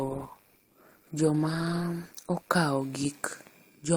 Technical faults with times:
0.00-2.50 adaptive stream starting at a low bitrate

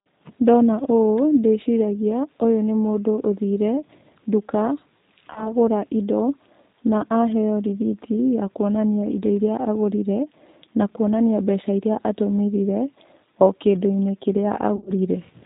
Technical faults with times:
0.00-15.46 G.729 codec
5.33-5.54 VoIP packet loss concealed by the speech codec
14.76-14.91 VoIP packet loss concealed by the speech codec

